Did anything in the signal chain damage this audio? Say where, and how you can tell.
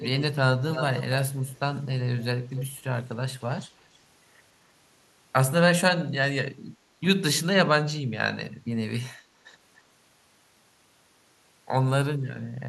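Yes. The damage is in call processing: the far end was likely on a loudspeaker, and its echo canceller let part of the returning speech slip back, an echo leak. A delayed copy, about 292 ms behind, is heard at 0.00–0.22 s, 0.72–1.03 s, 1.47–1.59 s and 2.19–2.64 s. The copy is strongest around 0.72 s, only a little below the direct speech, and barely audible near 1.5 s.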